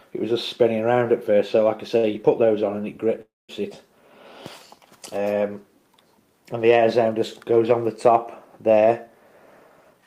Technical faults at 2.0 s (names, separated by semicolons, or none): short stall from a late packet